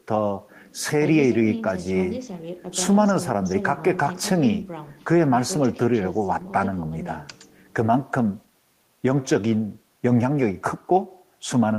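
No technical faults can be heard anywhere in this recording.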